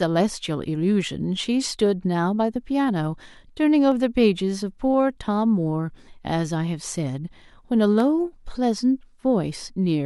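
From 0.83 s to 9.03 s, ticks recur every 1.02 s, about ten in all. These are periodic USB or driver dropouts: the audio path stalls at a fixed interval and a tiny fraction of a millisecond is skipped each time, jolting the waveform.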